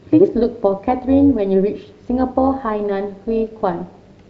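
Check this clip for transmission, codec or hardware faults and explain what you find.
There's one fault here, an overlap-add ripple running through the whole speech clip. The level swings by about 6 dB at around 200 Hz, because the frames were overlapped with windows that don't sum flat, so you hear a metallic buzz with extra tones around the voice.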